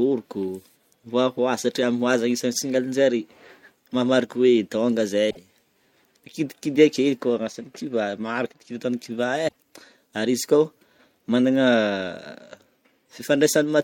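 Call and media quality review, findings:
Damaged data in a compressed stream, 5.27–5.37 s. Brief blip in the speech, about 0.11 s long. Decoder: corrupt bytes misread or rejected, sync lost until the next valid frame header.

Damaged data in a compressed stream, 9.45–9.55 s. Same blip, about 0.10 s. Probable component: compressed file or transport. Decoder again drops sync on bad frames and resynchronises at the next header.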